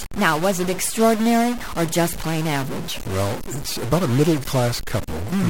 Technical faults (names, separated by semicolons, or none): stuck bit